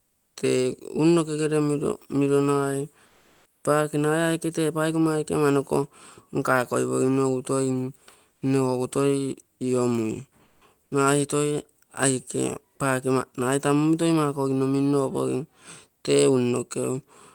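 Comfort noise in place of the background at 0.0–0.35, 3.05–3.63, 8.33–8.41 and 10.43–10.61 s, the last just before "nagai toi aike paake": pauses go flat and featureless, likely from Opus DTX.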